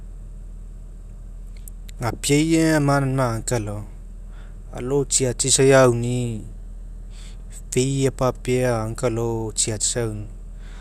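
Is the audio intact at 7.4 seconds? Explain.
No. At 7.39 to 7.44 s there is a repeated-frames fault. A short run of compressed audio, about 48 ms long, was delivered twice. The span fits two compressed frames. The decoder simply played the same block again, with no way to know it was a duplicate. You hear this as a brief stutter in the speech, where the same sliver of sound plays twice in a row. The repeat also makes the clip 48 ms longer.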